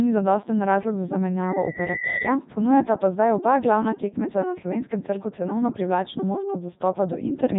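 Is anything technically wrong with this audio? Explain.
Yes. Throughout the speech, Codec 2 vocoder coding at 3.2 kbit/s: only pitch, voicing, energy and a spectral envelope survive, and the decoder rebuilds the voice from sine waves. The result is heavily damaged, robotic and buzzy, with nothing above 3.8 kHz.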